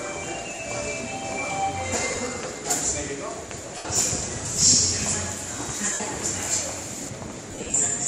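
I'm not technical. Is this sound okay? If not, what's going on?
No. There are two problems.

First, lost LE Audio frames. The wireless Bluetooth link dropped small chunks of audio, and the receiver filled each gap by repeating the last bit it had, scrambled so it wouldn't buzz. You hear brief noisy smears in place of the real sound at 0.55 s, 2.11 to 2.18 s (several tiny gaps), 3.77 to 3.85 s, 5.93 to 6.00 s, and 7.51 to 7.74 s. The last stretch is the worst, with gaps of up to around 40 ms scattered across it.

Second, pre-emphasis left on. Some systems deliberately boost the treble when sending or storing audio and expect the other end to turn it back down. Here that second step never happened, in this case with the curve used for CDs. From 4.45 s to 7.09 s the sound is too bright and thin, with hissy, sharp edges pushed forward and less body underneath.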